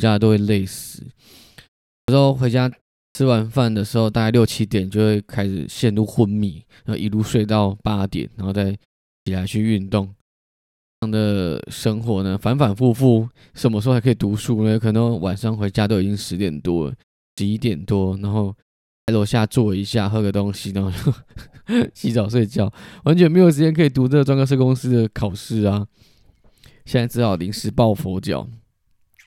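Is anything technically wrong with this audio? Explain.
Yes. There is a clipped start after a pause at 1.97, 3.05, 9.16, 10.92, 17.27 and 18.97 s. In each case the output device has gone idle during a short gap of 0.32 to 0.79 s and takes time to wake and lock again. The first 100 to 112 ms of speech after each gap is lost, so the speech snaps in abruptly from silence without its opening sounds.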